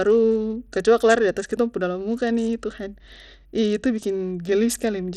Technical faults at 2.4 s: Bluetooth SBC compression

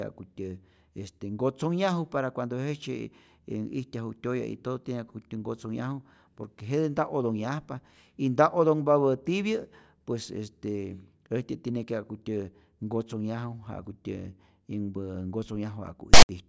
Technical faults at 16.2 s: file tags played as audio

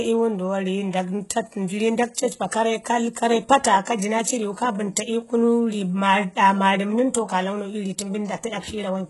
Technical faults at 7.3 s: HE-AAC compression

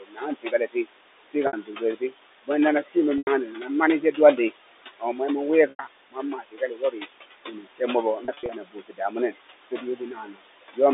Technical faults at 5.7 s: noise suppressor artifacts; speech cut by the noise suppressor; packet loss with pitch repetition

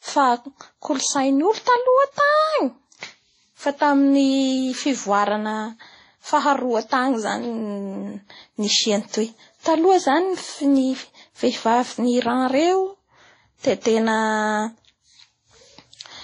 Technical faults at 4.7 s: transcoding between lossy codecs

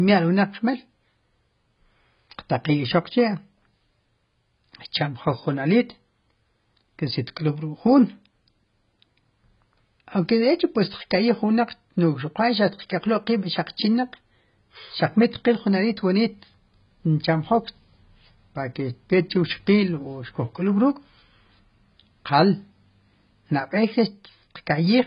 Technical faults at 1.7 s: AAC compression

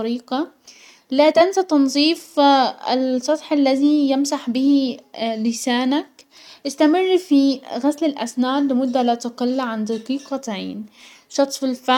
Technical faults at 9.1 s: none

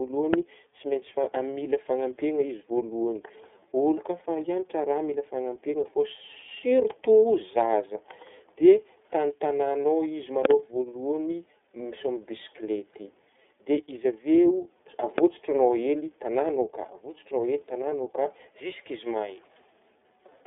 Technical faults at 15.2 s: iLBC codec; loud pop

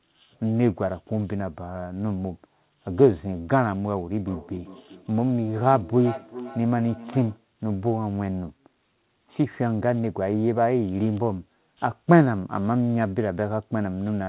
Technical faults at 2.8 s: none

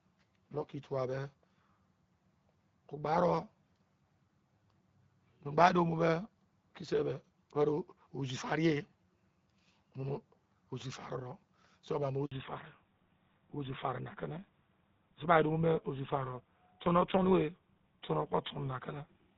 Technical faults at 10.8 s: none

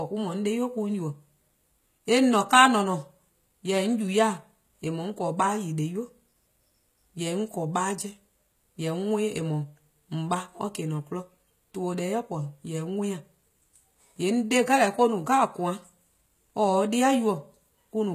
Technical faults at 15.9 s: HE-AAC compression

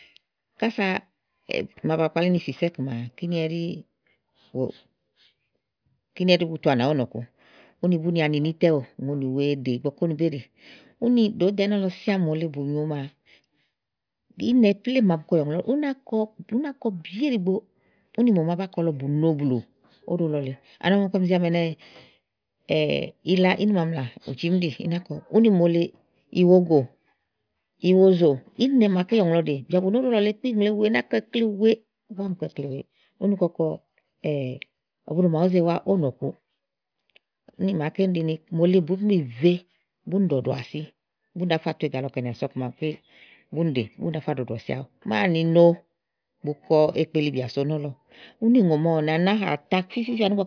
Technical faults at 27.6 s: none

